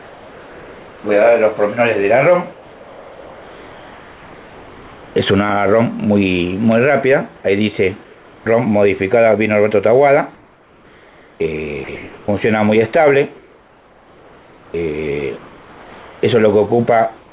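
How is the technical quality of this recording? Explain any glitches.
The recording has three related kinds of gap-filling fault. All of them point to discontinuous transmission on a call link. The audio is band-limited, with nothing above 4 kHz, which fits a narrowband telephone codec such as G.711.

Comfort noise in place of the background occurs from 0.00 to 1.04 s, from 2.52 to 5.16 s and from 8.04 to 8.46 s. In these pauses the real background, which sits about 24 to 29 dB below the loud passages, gives way to a smooth, featureless hiss about 3 dB quieter. The likely cause is a sender that stopped transmitting during the pauses, leaving the receiver to synthesise a rough spectral match of the room.

An onset clipped by the voice detector is heard at 5.14 s and again at 8.44 s. At each point the sound enters abruptly, with roughly its first 20 ms missing, so the soft attack is lost and the start seems to jump straight out of the synthetic noise. 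This likely comes from the voice detector reacting late to returning sound. The receiver kept playing comfort noise until transmission resumed.

Sound chopped by the voice detector affects the stretch from 10.34 s to the end, at 17.32 s. About 3.8 s of that span is replaced in pieces, so quieter portions and edges of the sound drop out. The likely mechanism is a voice detector toggling repeatedly between sending and muting.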